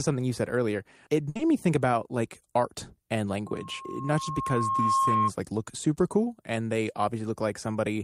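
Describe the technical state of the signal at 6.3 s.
At 6.3 s the speech signal is intact, with no dropout, clipping, glitch or other audible fault.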